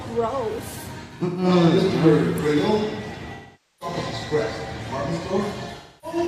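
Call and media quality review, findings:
AAC frame loss with concealment at 1.03–1.48 s, 3.34–3.96 s and 5.77–6.18 s. The decoder rebuilds the missing frames from the last good spectrum, so the sound turns smeared and noisy. The first loss is broken into separate gaps, the longest around 150 ms, and the second runs about 470 ms.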